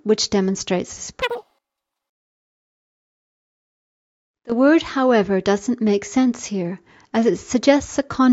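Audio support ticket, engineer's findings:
Wrong sample rate, 1.22 to 3.72 s. Sound runs 2.76 times too fast, pitch up 17.6 semitones. Fits 16 kHz material played at 44.1 kHz without resampling. Probable component: playback or output stage rate setting. Speed and pitch shift together.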